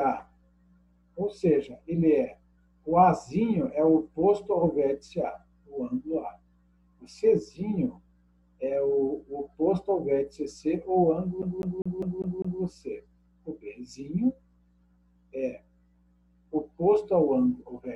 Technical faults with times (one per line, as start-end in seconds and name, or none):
11.42-12.62 CD stuck on one turn